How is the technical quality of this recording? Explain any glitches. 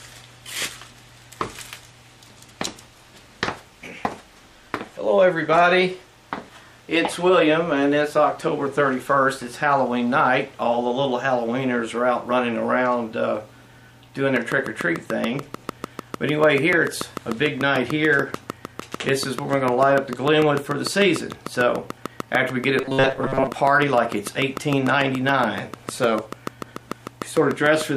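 The recording has two glitches in its second half: a long run of clicks and a brief stretch of robotic buzz.

Train of clicks, from 14.36 s to 27.82 s. Short pulses arrive at a steady 6.77 per second, about a hundred in all. The likely cause is interference from nearby equipment or a faulty connection or power supply injecting the same pulse again and again. Each click stands out sharply, roughly 15 dB above the sound, as an even ticking that carries on through the quiet gaps too.

Robotic sound from repeated short buffers, from 22.81 s to 23.48 s. Fresh audio arrives too slowly, and the playback most likely fills the shortfall by repeating the last few milliseconds while the real material is skipped, with most of this stretch made up of repeats. Looping a segment of about 7.5 ms imposes a fixed 134 Hz tone, so the sound turns into a flat, metallic buzz that only loosely tracks the original.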